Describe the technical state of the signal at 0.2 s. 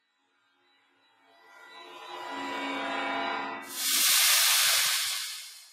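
At 0.2 s, the sound is cut by the noise suppressor, from 0.01 to 1.98 s: mistaken for noise, it sinks by up to about 17 dB. The noise suppressor applied to music or sounds is also active throughout, with level swings of around 15 dB as steady content and tails are pulled down.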